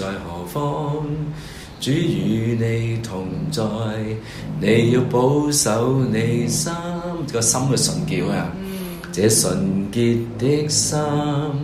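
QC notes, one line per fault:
No faults were heard on listening through this audio.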